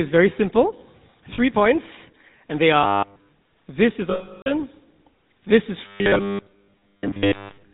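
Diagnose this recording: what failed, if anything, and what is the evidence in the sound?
The codec stage shows GSM full-rate coding at 13 kbps across the whole clip. A spectrogram shows a hard ceiling at 4 kHz with nothing above it. The speech sounds buzzy and gravelly because a vocal-tract model driven by sparse, regularly spaced pulses replaces the real excitation.

Lost GSM frames at the network stage cause three dropouts. At 1.34–1.39 s, between "very simple" and "points and they", 40 ms is lost. At 4.1–4.5 s, after "this is", 360 ms is lost, which fits 18 frames. At 6.58–6.74 s, 140 ms is lost, scattered, with the longest run about 100 ms. The decoder repeats the last good frame at falling level, producing a metallic ring. The waveform shows decaying tails.

Robotic sound from repeated short buffers runs from 2.83 to 3.29 s, between "points and they" and "this is". Essentially all of that stretch is a rigid 100 Hz buzz. 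This likely comes from the driver or buffer stage looping a 10 ms block while fresh audio is skipped. A spectrogram shows fixed harmonics spaced 100 Hz apart.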